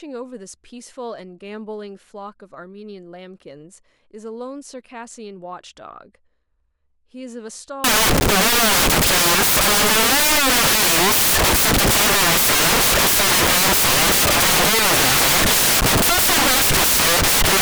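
Speech recording in which the audio turns to loud broadband hiss at 7.84 s and stays that way until the end at 17.62 s. The fault is samples built from the wrong bytes: the decoder is misassembling each sample, through a byte offset, swapped byte order or wrong alignment, so the rapidly varying low-order bits land in the most significant positions. The result sounds like dense white noise on the louder speech.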